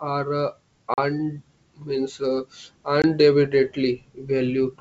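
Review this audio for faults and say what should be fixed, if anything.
Packet loss on an ADPCM call breaks the speech twice: at 0.94 to 0.99 s, a 40 ms gap consistent with about two lost packets, and at 3.02 to 3.05 s, a 20 ms gap that fits a single lost packet. Each loss is filled with silence, leaving a hard-edged hole. Because ADPCM codes each sample relative to a prediction, the receiver's adaptive predictor and step size drift from the sender's during the gap. When the speech resumes, it comes back with brief, slight distortion until the two sides resynchronise. The G.722 wideband coding at 64 kbit/s carrying the call is clear apart from its usual faint upper-band hiss. To prevent this, add packet loss concealment that reconstructs the missing audio and resets or realigns the decoder state, and reduce loss on the network path with jitter buffering or forward error correction.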